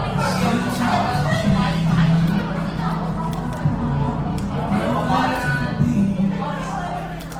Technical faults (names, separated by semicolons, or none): Opus compression